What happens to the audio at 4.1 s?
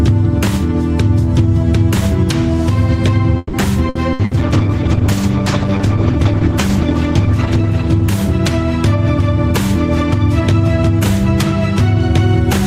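At 4.1 s the audio is in the middle of repeated packet loss, which gives it a robotic sound. The stretch runs from 3.37 to 4.34 s. There are about four separate holes, and the longest lasts about 160 ms. Each hole is covered by stretching the last good sound forward. About 340 ms is patched this way, roughly a third of the span, and about 180 ms is simply absent. The result is choppy, with fragments dropping out.

A call bitrate drop begins just after, at 4.18 s, and lasts until 9.68 s. The connection's bandwidth estimate fell, so the encoder had to spend far fewer bits. The sound points to a fall from around 48 kbps to about 12 kbps, with the lowest rate holding for about 2.9 s. At that rate the coding turns coarse and the top end is trimmed. The audio goes rough, watery and muffled.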